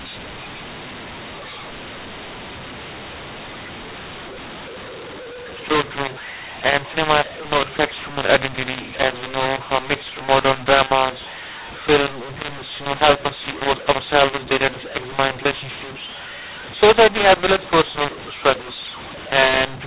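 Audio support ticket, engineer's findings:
mu-law and A-law mixed up, whole clip. Harsh, gritty distortion on the speech, gaps filled with noise. The G.711 link encodes mu-law fine, but the decoder reads it as A-law, so levels get scrambled and near-silent samples jump well above zero.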